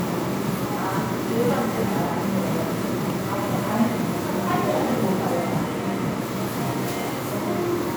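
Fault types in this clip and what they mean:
Generation loss: the sound is swirly, smeared and hollow throughout, with blurred attacks, more degraded than one lossy pass would leave. This likely comes from repeated MP3 decoding and re-encoding, around five passes, which fits a 128 kbit/s chain, each pass adding fresh quantisation damage.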